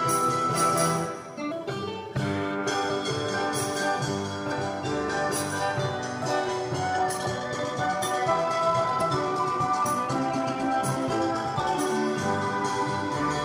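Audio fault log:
1.50, 2.89, 4.51, 7.25, 9.00 and 11.59 s, compressed frames skipped: brief smeared blips where the sound jumps ahead, roughly 50 to 200 ms each, fitting whole 26 ms codec frames going missing.
6.95 to 11.87 s, time-stretched section: the pace abruptly becomes rushed at nearly double speed with unchanged pitch, likely from software squeezing the audio by dropping short pieces.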